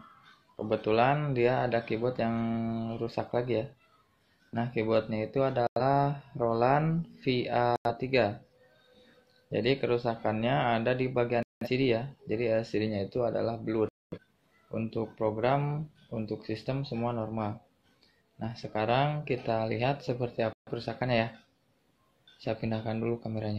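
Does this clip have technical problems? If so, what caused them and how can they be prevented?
Yes. Corrupt frame muted: sudden silent holes at 5.67–5.81, 7.76–7.91, 11.43–11.68, 13.89–14.18 and 20.53–20.72 s. Damaged compressed frames were rejected by the decoder and replaced with silence, so timing stays intact. Prevent this with checksummed transport and forward error correction or retransmission, plus packet-loss concealment instead of muting.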